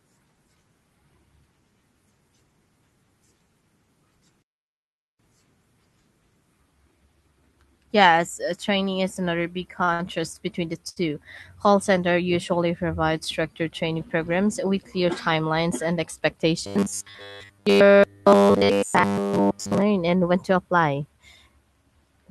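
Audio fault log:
9.84–9.90 s, 9.94–10.01 s, 10.89–11.10 s: short stall from a late packet. Each time a packet arrived late and the jitter buffer ran dry, so the last sound was stretched for about 39, 53 and 73 ms. Playback then resumed where it stopped, with nothing lost, leaving a held, slightly buzzy sound and added delay.
16.67–19.82 s: robotic sound from repeated short buffers. The sound turns into a rigid metallic drone with a fixed 100 Hz buzz, which fits a 10 ms block being replayed. The whole span is repeats, likely because fresh audio arrived too seldom and the skipped audio was covered by looping the last buffer. The Opus call path stays band-limited to about 12 kHz around it.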